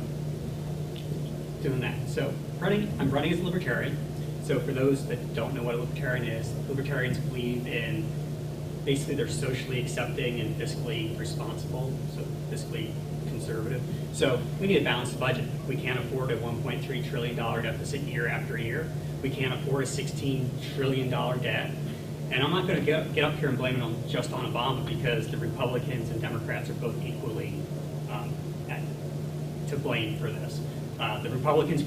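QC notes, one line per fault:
Throughout: low bit depth without dither. A grainy distortion follows the sound everywhere. Quiet passages turn gritty, and the faintest parts sputter or vanish. The error sits roughly 25 dB under the signal, which fits 7-bit rounding, likely with no dither applied.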